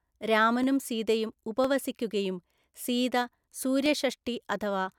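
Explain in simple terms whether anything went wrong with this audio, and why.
Four short, sharp clicks interrupt the speech, at 0.63, 1.65, 2.85 and 3.86 seconds. Each is likely caused by dropped samples: a fraction of a millisecond of the recording went missing, so the waveform jumps abruptly from one point to a later one.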